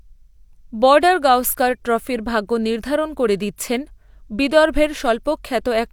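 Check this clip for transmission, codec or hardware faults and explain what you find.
Nothing to report on this speech recording: no faults found.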